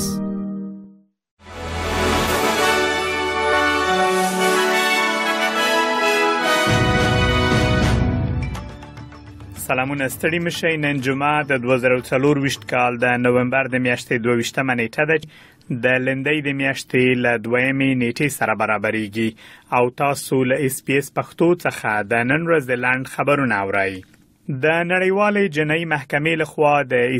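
At 15.22 s, damaged data in the compressed stream knocks the decoder out of sync, giving a brief blip that shows as a thin broadband spectrogram stripe.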